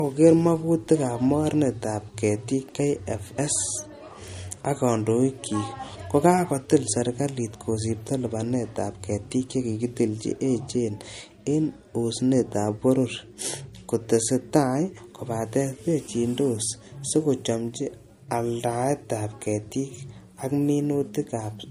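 Low-bitrate audio saved at a high bitrate runs through the whole speech clip: nothing is present above about 15.3 kHz, and the artefacts of heavy MP3 compression remain. The likely cause is a file first squeezed through a low-rate MP3 encoder, around 48 kbit/s judging by the damage, then re-encoded at a generous rate such as 192 kbit/s. The second pass keeps the earlier losses and cut-off intact and cannot rebuild the missing detail.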